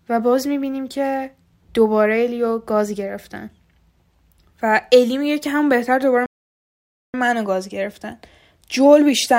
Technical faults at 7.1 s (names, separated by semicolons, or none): playback stall